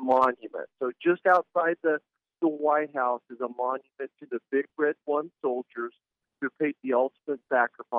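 No technical faults are audible.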